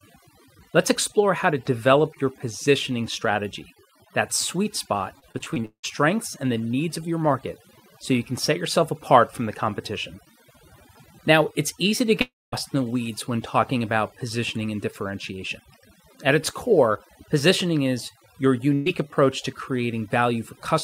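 Speech throughout, processed with overdone noise removal: the denoiser was set so aggressively that frequency bands near its noise estimate are pushed almost to nothing, taking the quiet parts of the voice with them. The background sits at near silence with small twinkling specks. On a spectrogram, the floor between phrases is blank except for scattered isolated dots, and the upper harmonics of the speech look ragged and patchy rather than continuous.

From 5.19 to 5.85 s, between "strategy that sweet spot" and "and the needs of", repeated packet loss gives a choppy, robotic sound. Holes keep opening in the stream and each is patched by stretching the last bit of sound. The concealment fills nearly half of that span, about 0.3 s is missing outright, and the longest single gap is about 0.18 s. The waveform shows a stuttering envelope, and the spectrogram shows smeared, repeated blocks.

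At 12.21 to 12.54 s, after "it's easy to" and before "in the weeds when", the sound turns into a short fading buzz or hiss and then goes silent for about 0.22 s before resuming, with about 0.32 s of audio never heard. This is likely a long network dropout, with the receiver extending the last sound until it ran out. It appears as a decaying smear into a flat, empty section.

At 18.74 s, right after "core positioning is your", a burst of packet loss removes about 0.12 s. The gap is entirely filled by a held, fading continuation of the previous sound, with no true silence. On a spectrogram it shows as a brief frozen, fading band before speech resumes further on.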